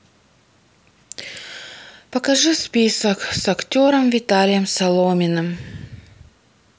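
From 2.39 s to 3.88 s, the speech slows by 5.3% and drops almost a semitone, 95 cents. Then it snaps back to normal. This is a drift correction step. Clock-matching software likely shifted the playback rate in one jump to manage its buffer.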